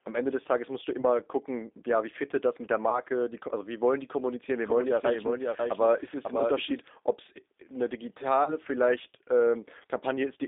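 Throughout, the speech sounds rough and synthetic, with plainly audible codec damage, and it is confined to a narrow band of about 250 Hz to 3.7 kHz with nothing above. This is the G.729 codec at 8 kbit/s. It does not send the waveform. It rebuilds each 10 ms frame from a vocal tract filter, a pitch predictor and a few pulses, so fine detail is replaced by an approximation.

From 1.0 to 1.06 s, 2.89 to 3.0 s and 8.44 to 8.54 s, the sound smears into a stretched, buzzy or noisy tone that fades, and the speech stays weakened for a moment afterward. This is VoIP packet loss concealed by the speech codec. Each gap covers 30 ms, which fits a single lost packet. The decoder filled it by extending its last pitch and filter settings at falling gain. Because each frame depends on the one before, the damage outlasts the gap.

From 4.65 to 6.81 s, a second copy of the audio runs about half a second behind the first and roughly 5 dB quieter. 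It is full-band with no room decay, and it starts and stops abruptly. This is a doubled audio track, likely caused by the same signal being mixed in a second time through a slower path or by an edit leaving two misaligned copies.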